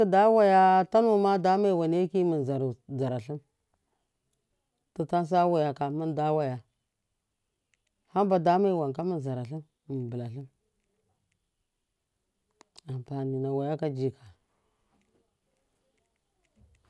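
Nothing in this speech recording points to a technical fault at any point.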